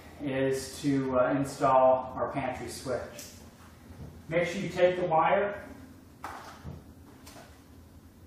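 Nothing goes wrong anywhere in this one; the sound just runs along without a single technical hiccup to point at.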